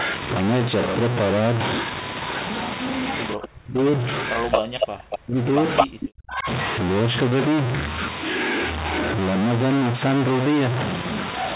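A stuck bit is the likely cause of the damage running through the whole recording: one bit of each sample seems fixed at a single value, so about half the samples are pushed off by that bit's weight in a pattern that follows the waveform. Because the error flips with the sign of small values, the pauses are filled with noise instead of falling quiet.

From 3.35 to 4.1 s, 4.34 to 5.52 s and 5.83 to 6.47 s, the speech is suppressed in double talk. With both ends talking at once, the echo canceller likely could not tell this talker from the loudspeaker echo and turned the signal down. The speech sinks, at its deepest by about 40 dB, and drops out in pieces over roughly 0.7 s, 1 s and 0.7 s.

Overlapping these stretches, an echo leak from a loudspeaker at the other end likely let part of the speech through the canceller, which sent it back delayed by 220 ms. Short scraps appear at 4.51 to 4.6 s, 4.81 to 4.85 s and 5.11 to 5.16 s, the first two at about the level of the speech and the third about 10 dB below it. 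A longer stretch from 5.77 to 6.07 s comes in about 5 dB louder than the speech.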